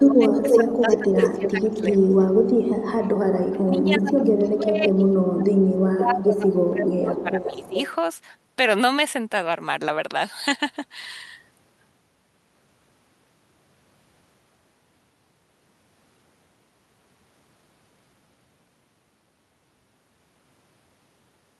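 In this speech clip, the voice dips by up to about 20 dB across most of the first 7.78 s, likely speech suppressed in double talk as the canceller ducked both sides. Delayed copies trail the voice at 0.12–1.49 s (about as loud as the speech), 2.41–2.6 s, 3.46–3.51 s, 4.27–6.51 s and 7.14–7.91 s, with the delay drifting from 343 to 356 ms. This is likely echo leak from a far-end loudspeaker the canceller failed to fully remove.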